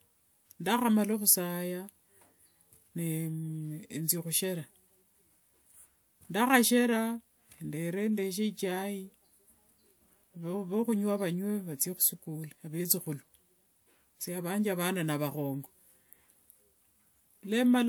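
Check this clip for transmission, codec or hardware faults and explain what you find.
No transmission, codec or hardware fault turns up anywhere in this speech recording.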